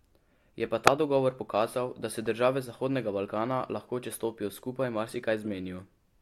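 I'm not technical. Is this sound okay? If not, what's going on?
No. Corrupt frame decoded at 0.87 s, 2.26 s and 5.44 to 5.47 s: damaged bits of compressed audio were played anyway, making brief blips, the first loudest.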